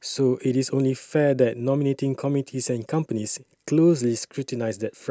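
No technical faults are audible.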